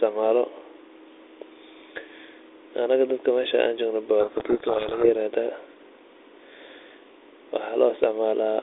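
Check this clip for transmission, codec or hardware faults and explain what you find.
There's one fault, a codec payload misread, running from 4.2 to 5.1 s. The speech comes through a narrowband line, about 250 Hz to 3.6 kHz with only a light codec hiss, which fits G.726 ADPCM at 32 kbit/s. During that stretch the two ends disagree on the bit order of the G.726 code words. The decoder reads each code word with its bits in the wrong places and rebuilds the wrong differences from its prediction, so the speech gets buried in harsh, rasping distortion until both sides agree on the packing again.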